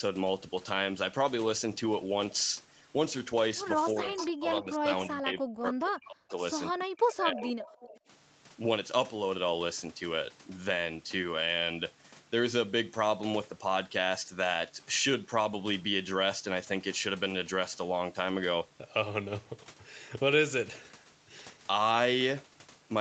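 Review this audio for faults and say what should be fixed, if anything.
Speech suppressed in double talk occurs from 3.93 to 6.41 s and from 6.72 to 7.62 s. The speech dips by up to about 40 dB. The likely cause is an echo canceller that turned everything down while both sides spoke.

Echo leak occurs at 4.17 to 4.31 s and 7.42 to 8.0 s. A copy of the speech returns about 306 to 309 ms late, roughly 10 to 15 dB quieter. This is likely loudspeaker pickup that the canceller missed.

A headset on the loudspeaker side, or an echo canceller with better double-talk detection, would prevent both.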